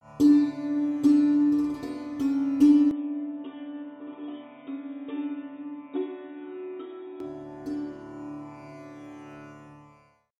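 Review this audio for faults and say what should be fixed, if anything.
From 2.91 s to 7.20 s the sound turns dull and boxy, with nothing above 3.8 kHz, a level drop of around 10 dB and a different, faint background noise roughly 50 dB down. It then clears abruptly, with no silence at either switch. This is likely an input switched to a poorer device. A filter or codec bandwidth change would narrow the band without shifting level and noise floor together and back. Lock the recording input so the system cannot change devices mid-session.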